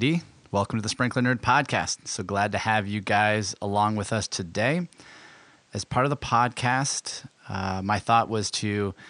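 Nothing in this speech recording stood out as a technical fault on listening, with the room's background noise sitting about 40 dB below the speech as part of the recording itself.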